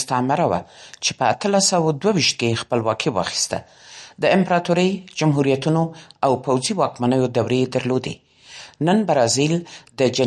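From start to finish the speech carries a watery, swirling texture, and nothing sounds above 11.8 kHz. The likely cause is MP3 compression at a low bitrate, with damage that fits roughly 48 kbps. The encoder ran short of bits. It cut the treble at a fixed point and dropped weak frequency lines. Those lines flicker on and off between frames. S sounds turn chirpy and metallic. Sharp onsets smear.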